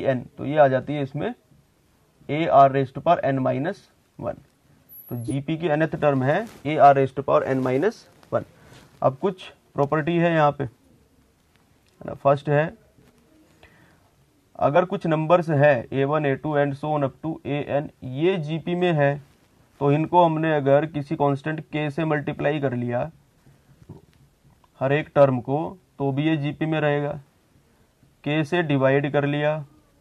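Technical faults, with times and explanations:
6.64 s and 14.75 s, compressed frames skipped: at each point the sound jumps ahead by about 20 ms because one or more compressed frames never reached playback, either missing from the file or rejected by the decoder as damaged. On a spectrogram a thin vertical seam appears where harmonics and textures fail to line up.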